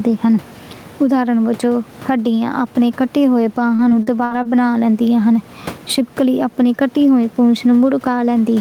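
Across the whole clip the level breathes, with a swing of around 10 dB; the room noise sits about 30 dB below the speech. This is gain pumping, and the likely cause is input gain set far too high with a fast limiter clamping each loud syllable. Loud and soft parts end up closer in level, and peaks sound flattened rather than clipped.

From 3.75 to 4.47 s the speech turns choppy. This is repeated packet loss (robotic sound): about five short holes, the longest near 58 ms, open in quick succession. Each is patched by stretching the preceding sound, so roughly a quarter of that stretch is synthetic fill. A single dropout would leave one isolated smear. Here the patches recur in a tight cluster, giving choppy sound with pieces missing.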